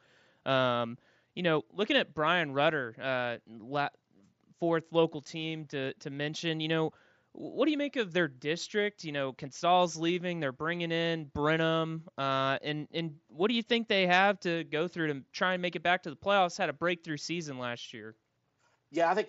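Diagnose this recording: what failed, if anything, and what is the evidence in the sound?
The fault is concealed Bluetooth headset packet loss on the wireless link. At 10.08 s there is a barely audible blip, about 7.5 ms long, which fits a single lost frame. The phone filled the gap by repeating a closely matching stretch of the preceding waveform. The mSBC headset codec shows light graininess within its 8 kHz band.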